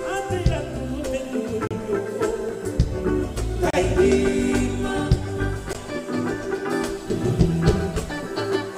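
At 1.67 to 1.71 s, a gap between stream segments cuts in. Mismatched segment timestamps leave a hard-edged hole of silence, about 33 ms long.

From 2.22 to 2.75 s come CD scratch ticks. There are five short ticks, the longest about 3 ms, where damaged data was patched or muted.

The segment gaps return at 3.70 to 3.74 s (30 ms) and at 5.73 s (17 ms). They fall every 2 s, matching the segment length.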